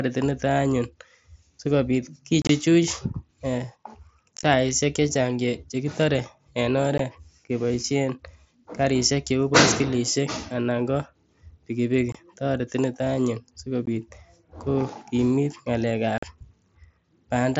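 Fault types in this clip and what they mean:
Unconcealed Bluetooth headset packet loss: voice packets between headset and phone went missing, and silence or an idle pattern replaced them, so the sound drops out with hard edges. It happens six times, at 2.42, 4.37, 6.98, 12.12, 13.86 and 16.18 s. The first two are scattered across 75 ms, losing 52.5 and 45 ms and sounding chopped and crackly. The rest are gaps of 15 to 45 ms, in steps that fit 7.5 ms frames.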